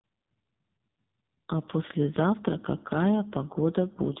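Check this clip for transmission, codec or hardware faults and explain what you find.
One fault runs through the whole clip: AMR narrowband mobile codec coding. Nothing above 3.8 kHz survives, and the speech sounds heavily buzzy and synthetic. That happens because a vocal-tract model driven by sparse pulses rebuilds it, which fits a low AMR-NB mode around 6 kbps.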